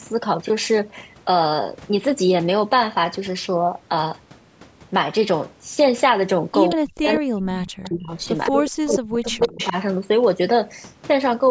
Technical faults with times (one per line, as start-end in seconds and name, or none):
6.69-6.76 echo leak
6.74-8.11 speech suppressed in double talk
7.07-7.16 echo leak
7.84-8.98 echo leak
8.50-9.76 speech suppressed in double talk
9.42-9.68 echo leak